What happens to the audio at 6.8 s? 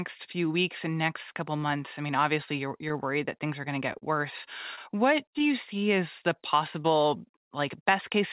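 Short concealed packet loss at 6.82–6.86 s, after "you see as the": audio arrived too late, so the receiver extended the preceding sound and blended back, leaving a brief smear.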